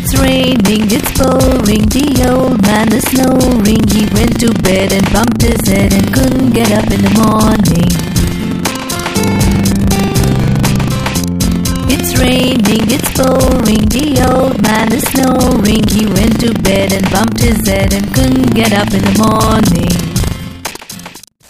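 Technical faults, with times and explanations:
Throughout, buffer tearing: a steady 25 Hz robotic rattle, present only with signal. The writer and hardware reader have slipped and cross inside each buffer, which fits a 40 ms period, so roughly 15% replays audio about 70 ms old, hard-joined on both sides.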